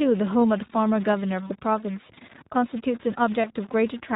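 Throughout the speech there is a distortion that also fills the pauses with noise, likely from a stuck bit. On the waveform it shows as jagged, offset samples, and on the spectrogram as a broadband haze that never clears.

The whole clip also carries iLBC codec damage. Nothing shows above 4 kHz on the spectrogram, and the voice sounds plainly rough and synthetic, which fits roughly a 15 kbps mode with 20 ms frames.

From 1.48 to 1.52 s, lost iLBC frames produce a brief held, buzzy vowel. This fits a single concealed 20 ms frame, seen as repeated pitch cycles.

From 3.42 to 3.46 s, the same concealment recurs. The repeated cycle shows as a short, uniform stretch in the waveform, and the voice returns almost immediately afterward.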